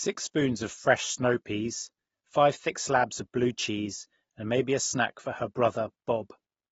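From start to end the speech stops dead at 7.6 kHz, with fizzy, smeared sibilants and a plainly audible warble, likely from AAC compression, fitting AAC-LC near 24 kbps. A spectrogram shows a flat ceiling at 7.6 kHz.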